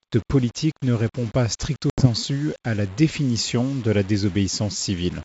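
The speech was likely quantized to very few levels and rounded without dither, pointing to about 6 bits. This is low bit depth without dither: grainy distortion that tracks the speech, with error only about 25 dB below the signal.

From 1.90 to 2.07 s, packet loss on an ADPCM call leaves an 80 ms hard-edged hole of silence. The desynchronized decoder then brings speech back with brief distortion.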